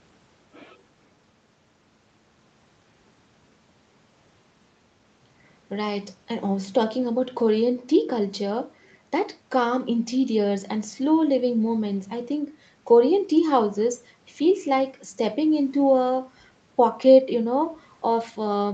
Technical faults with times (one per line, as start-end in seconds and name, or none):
none